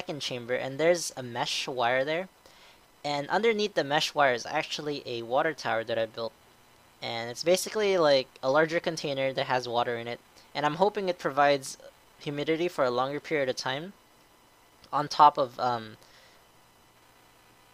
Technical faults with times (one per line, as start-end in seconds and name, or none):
none